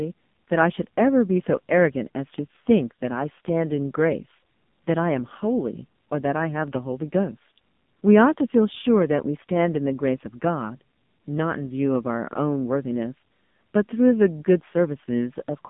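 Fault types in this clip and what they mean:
AMR narrowband mobile codec: the speech is confined to a 150 Hz to 3.6 kHz band and rebuilt from a vocal-tract model, leaving it heavily buzzy and synthetic, which fits a low mode near 5.9 kbps. A plain telephone filter only muffles; this codec resynthesises the voice itself.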